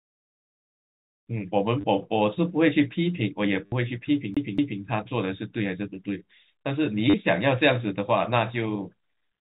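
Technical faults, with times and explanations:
1.81 to 1.84 s, 3.66 to 3.72 s and 7.10 to 7.14 s: packet loss with last packet repeated. Each gap is bridged by replaying the last packet: 30 ms, then 60 ms, then 40 ms. The lengths fit 10 ms packets, so the longest run buzzes at roughly 100 Hz. The repeats don't line up with the pitch cycle, and you get that brief robotic stutter.
4.34 to 4.81 s: CD stuck on one turn. A chunk of about 0.23 s plays twice more, as if the laser hopped back to the same spot each revolution. There's a tiny mute at each jump, so it comes out as that quick, even, mechanical stutter you'd recognise from a skipping CD, underneath the 4 kHz-limited telephone band of the G.711 coding running through the whole clip.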